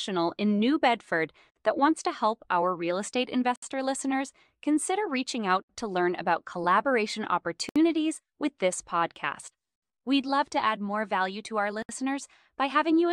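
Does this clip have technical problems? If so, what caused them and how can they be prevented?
Yes. There are gaps at joins of encoded pieces at 1.50 s (about 55 ms), 3.56 s, 7.69 s and 11.82 s (about 67 ms each): short silences cut into continuous speech with smeared edges. Each piece was encoded separately, so encoder start-up delay and last-frame padding stay in at every join. Unlike a dropout, nothing is lost: the speech resumes exactly where it stopped, at seams on a 2 s segment grid. Prevent it by encoding the source as one stream or trimming each piece's encoder delay and padding before joining.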